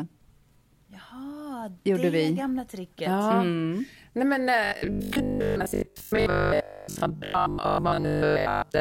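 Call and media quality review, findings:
Robotic sound from repeated short buffers, 4.64–8.80 s: speech collapses into a metallic 50 Hz buzz, most of it looped. Likely jitter buffer underrun replaying roughly 20 ms chunks.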